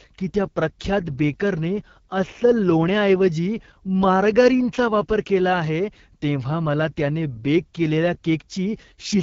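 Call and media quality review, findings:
Speech, whole clip. AMR wideband (HD Voice) codec artefacts throughout. Rough, raspy texture, plainly audible. Points to AMR-WB at 8.85 kbit/s, the second-lowest mode. Coder models the vocal tract and drives it with sparse pulses up to 6.4 kHz. Too few bits for the pulses at this rate, so harmonics break up into grit. Top band, 6.4 to 7 kHz, is shaped noise. Component: wideband speech codec in the call path.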